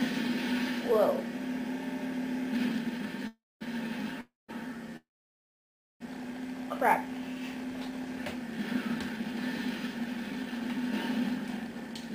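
Packets were likely held up in transit three times, letting the jitter buffer run dry and causing a call audio freeze at 3.27 to 3.63 s, 4.21 to 4.51 s and 4.97 to 6.02 s. Each time the receiver stretched the last sound into a brief fading buzz or hiss before going quiet: about 230 ms of silence in the first, 170 ms in the second and nearly a full second in the third. Nothing is lost. The sound resumes where it broke off, so each pause adds its full length, 333 ms, 278 ms and 1038 ms, to the delay.

From 7.92 s to 12.11 s comes a jitter buffer speed-up. With the backlog of late packets now sitting in the buffer, the receiver cut out short pitch-period slices again and again to win back about a fifth of a second. Playback runs at 105% of normal speed with the pitch unchanged, so that stretch sounds slightly hurried.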